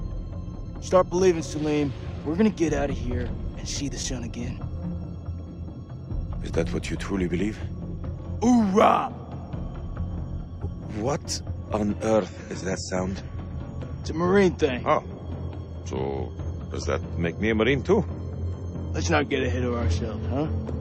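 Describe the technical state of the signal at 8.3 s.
The signal at 8.3 s is intact, with no audible fault at that moment.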